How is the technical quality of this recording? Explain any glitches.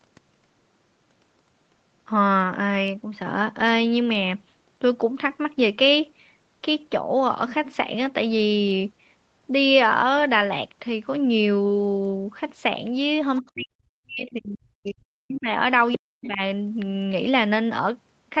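The recording has clear call-related glitches in its last few seconds, all clustered between 13.4 and 16.4 s, heard over a call-codec band that stops at about 8 kHz.

Other side's voice leaking through: scraps of a second voice appear at 13.36–13.5 s, 14.85–14.91 s and 15.92–15.97 s. The first two sit far below the talker, about 25 and 35 dB down, while the last is much stronger, only about 10 dB under. The likely cause is an echo canceller leaving residue of the far end's loudspeaker in the microphone. What separates this from crosstalk or background chatter is how short the scraps are, each tied to moments when the canceller is struggling.

Speech suppressed in double talk: the talker's level collapses from 13.4 to 15.48 s, about two seconds in all, and again from 15.96 to 16.4 s, dropping by roughly 40 dB at its deepest. This is likely the canceller turning everything down while both ends spoke at once. 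Unlike a network dropout, the dips line up with the leaked far-end fragments, and the voice dips, thins or cuts out in pieces rather than breaking up with repeated or stretched audio.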